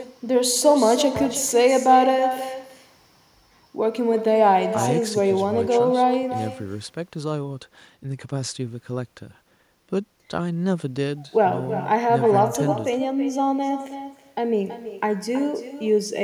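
From start to finish the speech carries echo with no canceller: the far end's loudspeaker is feeding its microphone, and nothing removes it. Every phrase returns around 300 ms later, about 10 dB quieter and thinner than the original.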